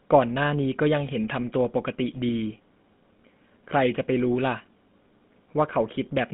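GSM full-rate codec, throughout: the speech passes through a vocal-tract model driven by regularly spaced pulses, giving a buzzy, gravelly roughness that is plainly audible. The band runs only from 150 Hz to 3.6 kHz, which fits the 13 kbps GSM full-rate coder.

GSM bit errors, from 2.29 to 2.33 s: corrupted filter, pitch or gain values reach the decoder for a burst of a few frames, bending the spectrum or jolting the level. The voice breaks into a brief squawk and gargle.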